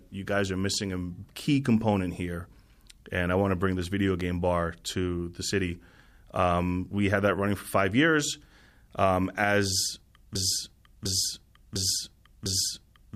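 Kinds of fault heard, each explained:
Broken-record loop: from 10.35 s to the end, one 0.70 s speech fragment repeats four times, likely a stalled stream resending its last chunk.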